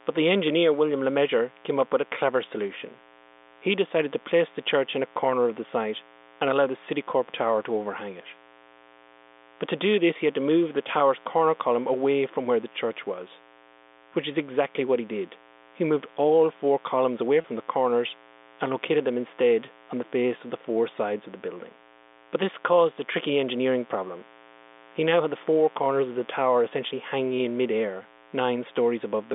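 A mains buzz runs through the whole recording. It is built on 60 Hz, with a harsh stack of harmonics reaching well up the band. Sharp switching spikes from a dimmer, rectifier or poor shielding got into the signal. It sits about 25 dB below the speech as a steady, raspy drone.

From 17.41 to 17.44 s there is packet loss with pitch repetition. About 30 ms of audio went missing, which fits three lost packets. The receiver filled the gap by repeating the last pitch period. The speech briefly holds on a slightly buzzy, sustained tone before resuming. All of this passes through the G.711 telephone band of roughly 250 Hz to 3.6 kHz.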